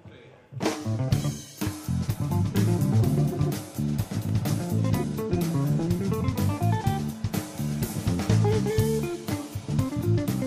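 No dropouts, clicks, distortion, level jumps or timing glitches turn up anywhere in the audio, so there is nothing to flag.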